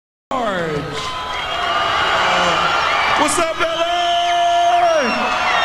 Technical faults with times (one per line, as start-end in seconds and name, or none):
0.00-0.31 cut-off start